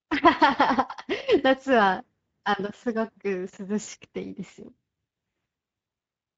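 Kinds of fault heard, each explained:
Speex codec: Throughout the speech the Speex codec is plainly audible. At a setting that points to around 16.8 kbps, the CELP coder has too few bits to model the excitation faithfully, so the voice comes out hoarse and noisy, with a grainy, slightly synthetic edge.
VoIP packet loss concealed by the speech codec: From 3.83 to 3.89 s, about 40 ms of audio is missing, which fits two lost frames. The decoder covers the gap by extending its last pitch and spectral envelope while turning the gain down. The speech smears into a short buzzy, coloured tail that fades, and because each frame is built on the one before, the voice sounds weak just after the gap.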